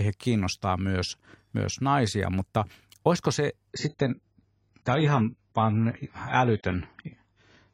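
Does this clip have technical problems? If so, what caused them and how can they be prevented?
Yes. From about 3.70 s to the end, the speech suddenly turns dull and swirly with no gap: an adaptive stream at a lower bitrate. Nothing above roughly 7.6 kHz survives, which fits a drop from around 96 to 16 kbit/s after the connection slowed. To prevent it, give the player a steadier connection or a bigger buffer, or lock it to the higher-bitrate rendition.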